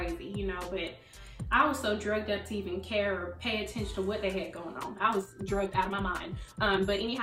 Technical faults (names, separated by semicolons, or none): time-stretched section